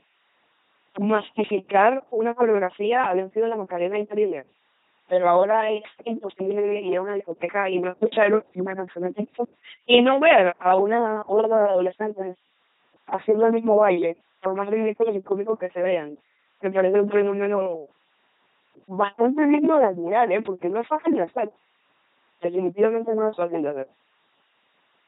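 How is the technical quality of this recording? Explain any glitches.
The recording's technical quality is poor: the whole of the speech has passed through a very low-rate vocoder.

LPC-10 vocoder, throughout the clip. Each short frame is modelled as a simple all-pole vocal tract filter driven either by a regular pulse train or by noise, never a mix. The heavy damage heard here fits a 2.4 kbit/s LPC-10 coder. The result is a buzzing, mechanical robot voice, with no content above 3.9 kHz, and stray buzz or hiss wherever the voiced/unvoiced choice goes wrong.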